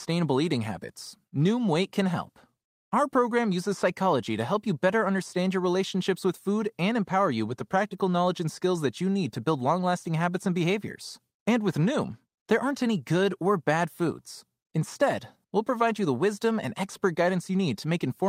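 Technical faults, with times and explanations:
No technical faults are present.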